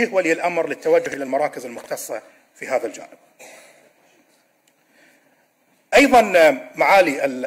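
At 1.06 to 1.14 s and again at 1.78 to 1.86 s, chunks out of order: a 20 ms block plays three blocks late, after material meant to follow it. Nothing is lost, but each 80 ms stretch sounds briefly jumbled, with three hard joins.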